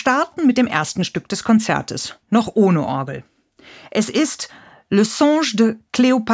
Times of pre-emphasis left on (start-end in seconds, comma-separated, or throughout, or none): none